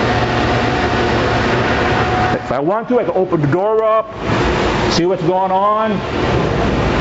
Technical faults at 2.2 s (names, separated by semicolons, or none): gain pumping